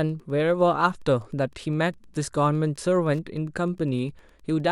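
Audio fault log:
throughout, Wi-Fi interference: a faint, steady ticking sits under the speech for the whole clip, repeating every 102.4 ms, so close to ten ticks per second. A nearby Wi-Fi radio is sending its regular beacon, and the audio circuit rectifies each short radio-frequency burst into a click in the audio band. The ticks stay well below the speech, roughly 40 dB down, and are easiest to hear in pauses.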